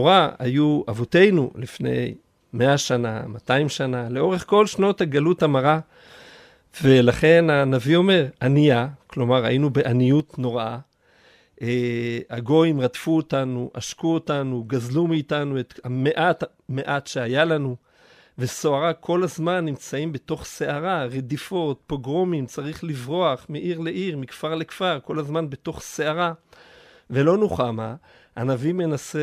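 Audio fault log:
10.20–29.23 s, one channel drops out: one side of the stereo pair has likely stopped delivering signal partway through and never recovers before the end. Once the two channels are summed to mono, the speech common to both falls abruptly by about 6 dB at 10.20 s, because only half the contribution remains. Anything present only in the lost channel vanishes, so the rest of the speech sounds suddenly quieter.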